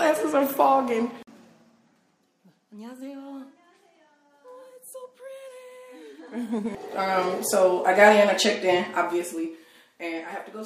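From 1.02 to 1.96 s the level drops by roughly 20 dB in 2 dB steps, rises again by about 20 dB from 6.06 to 7.17 s, then falls roughly 15 dB in 1 dB steps from 8.79 to 9.81 s. Each is zipper noise: the gain jumps around ten times a second without smoothing, so a fast ticking rides the moving level. Unlike a smooth fade, the ticks stop once the level settles.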